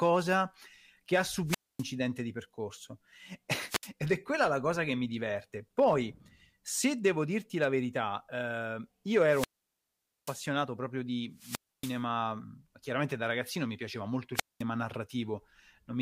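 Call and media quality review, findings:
Wireless microphone squelch dropout, five events in the speech: 1.46–1.85 s ("che ha" / "di percorso", 252 ms mute), 3.68–3.90 s (67 ms), 9.26–10.42 s ("la verità eh io" / "proprio di", 837 ms), 11.35–12.01 s (283 ms), 14.34–14.63 s (after "ragazzino mi piaceva molto", 209 ms). The FM link fades, hiss rises, and the receiver squelch gates the output. On a spectrogram this shows as a broadband noise smear, then an empty column. On the waveform it is a near-flat line.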